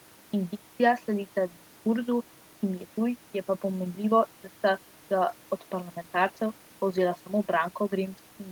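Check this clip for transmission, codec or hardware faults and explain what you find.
No faults turn up here: the speech signal is intact and continuous throughout, with nothing audibly disturbing it.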